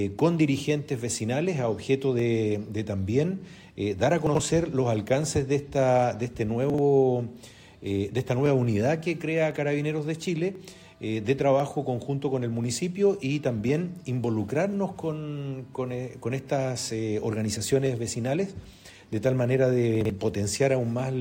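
Clock drift buffer slips, 0.10 to 21.00 s: a click recurs every 1.04 s, about twenty in all, likely from two unsynchronised clocks drifting a few hundred ppm apart, dropping or repeating a small block of samples.

Chunks out of order at 4.27 to 4.40 s, 6.70 to 6.78 s and 20.01 to 20.10 s: a 42.67 ms chunk plays two, one and one chunks late, giving brief jumbled moments.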